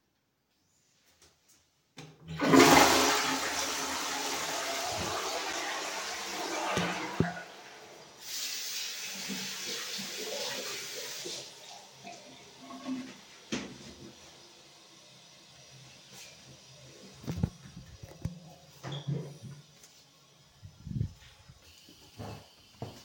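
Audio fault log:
5.53 s, block of digital silence: the sound drops to silence for about 6 ms and returns with no fade. The abrupt edges and short gap are heard as a tick or dip. The gap fits a 256-sample buffer left unfilled.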